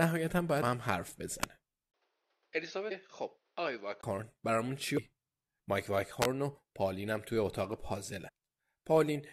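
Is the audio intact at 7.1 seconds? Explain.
Yes, at 7.1 seconds the speech plays through intact, with no dropout, click, distortion or other fault at that point.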